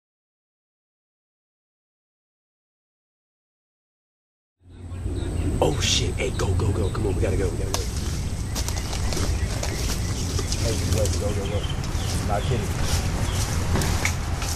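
Nothing technically wrong stands out here; the level just eases up in a smooth fade-in from somewhere around four and a half seconds until 5.65 s, the way an editor would shape it, with no click or hard edge.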